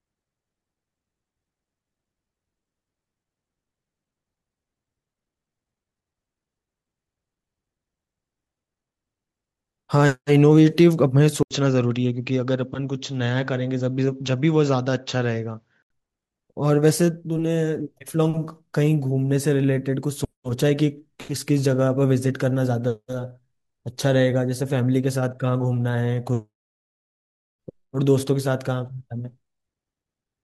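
Speech clip in which, from 11.43 to 15.90 s, the sound turns dull and slightly quieter, by about 5 dB, with nothing above 7.6 kHz, a faint new noise floor around 50 dB down, and an 80 ms gap at the switch, likely an input switched to a poorer device.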